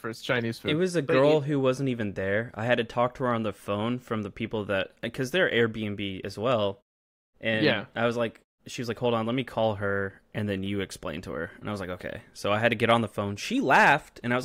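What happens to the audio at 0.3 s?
Nothing goes wrong at 0.3 s; the speech is intact at that moment.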